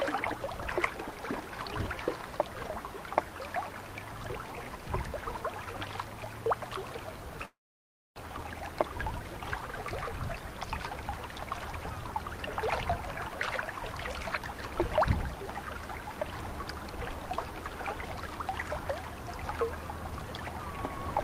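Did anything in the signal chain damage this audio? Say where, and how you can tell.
Yes. A long network dropout runs from 7.45 to 8.2 s: the last sound smears into a fading buzz, then about 630 ms of near-silence follows, and the audio resumes with roughly 600 ms missing. This is likely packet loss on the network path, masked by the receiver's concealment.

A jitter buffer speed-up follows from 8.27 to 9.28 s. The audio plays at 110% speed without any pitch change, so it sounds hurried. The receiver is trimming pitch-period-sized pieces, about a tenth of a second in all, to drain the backlog left by the dropout.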